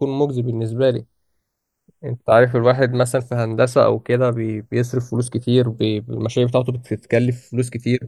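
From start to finish the channels are drifting apart. Left and right behave like recordings from devices on separate clocks, differing by something on the order of 100 ppm, so the offset between them grows to roughly half a millisecond by the end. Summed to mono, the speech takes on a slow flanging sweep. A spectrogram shows comb notches gliding steadily downward as the delay lengthens.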